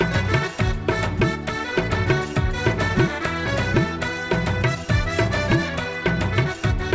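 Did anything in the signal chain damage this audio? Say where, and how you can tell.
Yes. Between 3.46 and 3.56 s the audio lurches forward with no gap and roughly a second goes missing: a skip ahead, caused by audio being dropped in transit or by the jitter buffer discarding queued audio.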